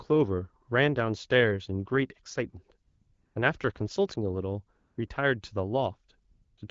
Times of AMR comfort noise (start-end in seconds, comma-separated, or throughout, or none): 2.87-3.35, 4.79-5.09, 6.29-6.57